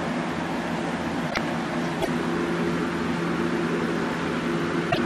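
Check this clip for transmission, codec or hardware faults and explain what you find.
There's damaged data in a compressed stream, hitting three times: 1.27 to 1.38 s, 2.00 to 2.08 s and 4.87 to 4.98 s. Corrupted bytes throw the decoder off its frames, so it resyncs at the next header, leaving a short glitch each time.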